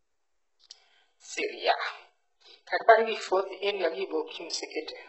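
From start to finish, the speech carries heavy coding damage, most likely from HE-AAC compression at a rate that fits about 8 kbps. Nothing survives above 8 kHz, yet the upper band doesn't sound simply dulled as with a plain low-pass filter. It stays bright but false, because spectral band replication has copied lower bands upward under a coarse envelope. Sibilants turn gritty and lispy, with a metallic sheen whose harmonics don't match the body of the sound.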